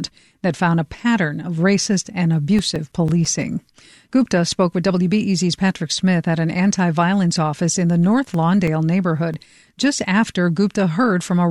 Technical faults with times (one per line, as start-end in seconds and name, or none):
2.42-3.58 CD scratch ticks
8.18-9.83 CD scratch ticks